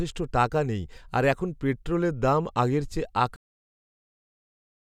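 A cut-off end arrives at 3.36 s, right after "পেট্রোলের দাম আগের চেয়ে": the speech stops mid-sound and falls straight to digital silence for the remaining stretch of the clip. The final buffers of audio were never written or played out, so the recording simply ends where the data ran out. There is no decay, no breath or room tail, just an abrupt truncation that leaves the sentence hanging.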